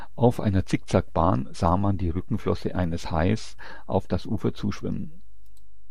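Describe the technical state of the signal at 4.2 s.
At 4.2 s the speech carries a DC offset, as it does from start to end. The whole waveform sits shifted off zero by a constant amount. You cannot hear it directly. It eats into headroom and shows as steady energy at the lowest frequencies.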